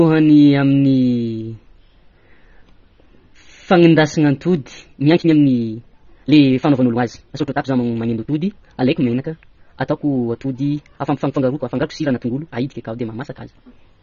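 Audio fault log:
throughout: AAC compression, likely. The speech has nothing above 6.9 kHz, so it sounds dull and muffled. Damage is plainly audible, with a smeared, fizzy texture on sibilants. This fits a low bitrate near 24 kbps, where the encoder drops upper bands.
4.76 to 14.03 s: time-stretched section, likely. From 4.76 s to the end, speech runs about 1.85 times faster. Pitch stays the same. Short pieces are dropped to shorten it, so the pace changes abruptly and delivery sounds rushed.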